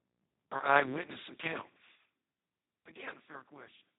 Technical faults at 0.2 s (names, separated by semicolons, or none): Speex codec